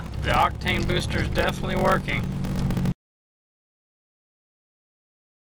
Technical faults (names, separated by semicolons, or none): block size mismatch (padded)